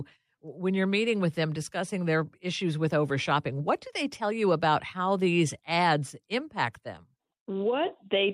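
No technical faults are audible.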